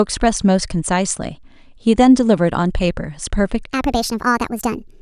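From 3.73 s to the end, the speech abruptly turns high and hurried, running about 1.45 times too fast and pitched roughly 6.45 semitones up. This is a wrong sample rate fault: samples are played back faster than recorded, without conversion, which fits 22 kHz material being played at 32 kHz.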